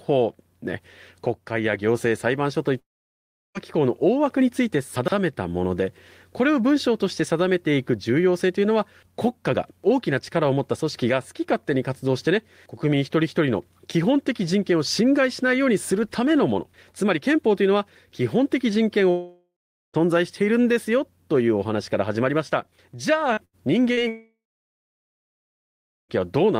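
From 2.79 to 3.58 s there is a long network dropout, likely a stalled connection: about 0.76 s of speech is lost, a brief fading tail gives way to roughly 0.7 s of near-silence, a flat gap on the waveform, and speech resumes further on.

At 4.96 to 5.12 s, chunks out of order: a 40 ms chunk plays three chunks late, so this moment sounds jumbled, and the spectrogram shows hard vertical seams at the joins.

From 19.11 to 19.97 s, a second long network dropout removes about 0.84 s, with a smeared tail before roughly 0.39 s of silence.

At 23.34 to 23.40 s and 23.93 to 24.00 s, short concealed packet loss fills 40 ms holes with continued sound, a brief smear or wobble visible as blurred, stretched harmonics.

Between them, at 23.45 to 23.56 s, a burst of packet loss drops 80 ms, heard as a held buzz or fading hiss turned down and shown as a decaying streak.

From 24.09 to 26.12 s, the third long network dropout loses 2 s, leaving about 1.7 s of silence after a fading tail.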